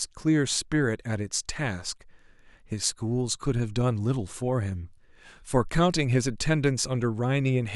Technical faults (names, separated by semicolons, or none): none